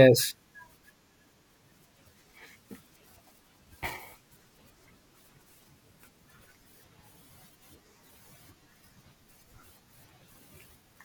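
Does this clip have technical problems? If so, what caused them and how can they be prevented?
Yes. From 1.44 to 6.19 s the speech takes on a rough, metallic edge from periodic clock jitter: interference wobbles the converter's clock at around 1 kHz, spraying sidebands at that spacing around every component, strongest on high frequencies. Unlike random jitter's even hiss, it is tonal and disappears in pauses. Shielding and clean power for the clock, or a low-jitter clock source, prevent it.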